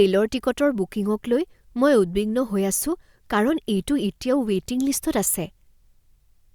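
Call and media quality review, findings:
Nothing stood out on listening to this speech recording.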